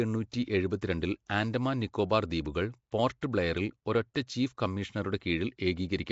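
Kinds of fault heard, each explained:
Nellymoser compression: The speech has a rough, hissy halo and a smeared, underwater quality throughout, with nothing above about 7.7 kHz. This is likely Nellymoser Asao, the old Flash microphone codec, at a rate that fits around 32 kbps. It codes short fixed blocks at a low, fixed bit budget, so weaker frequency bands get no bits at all and are filled with noise instead. That substitute noise produces the hiss and the watery blur.
pre-echo: Six sharp onsets are each preceded by a brief hiss, 12 to 17 ms long, that makes the attack sound soft and smeared. These come at about 0.32, 0.81 (just before "ആൻഡമാൻ നിക്കോബാർ"), 2.44 (just after "ആൻഡമാൻ നിക്കോബാർ"), 3.21, 4.14 and 4.27 s. The codec spreads its quantisation noise across a whole block. When a loud attack lands late in the block, noise sized for it leaks into the quiet moment just before.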